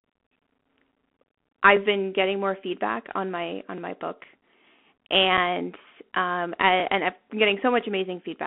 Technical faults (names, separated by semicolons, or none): Bluetooth CVSD headset codec; overlapping chunks; unconcealed Bluetooth headset packet loss